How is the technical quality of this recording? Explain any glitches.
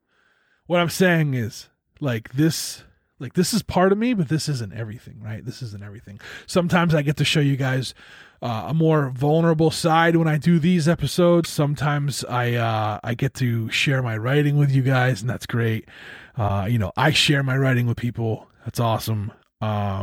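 The speech recording has two brief glitches of the same kind. From 11.43 to 11.46 s, between "when i do these" and "sometimes i uh i", and again from 16.47 to 16.50 s, just before "you know i share", the audio skips forward with a momentary disturbance lasting around 30 ms. The likely cause is a broken MP3 bit reservoir: frames were lost, and the following frame reached back for borrowed data that was missing. Each disruption spans roughly one 26.1 ms frame.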